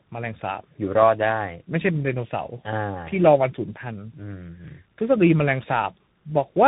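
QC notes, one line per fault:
Throughout: tandem speech coding. The call passed through two separate speech codecs in sequence. The sound fits a low-rate CELP coder like 8 kbit/s G.729A, later re-encoded by CVSD, with a G.711 A-law link in between. Each coder re-quantises the previous coder's errors, so they compound: the speech is rough and buzzy with a warbling, smeared texture. Nothing is present above 3.8 kHz, which makes it muffled.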